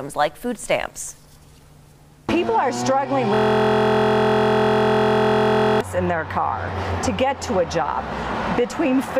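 From 3.34 s to 5.81 s a system hang loop repeats one 23.22 ms buffer, which fits a 1024-sample ring, producing a steady 43.1 Hz buzz.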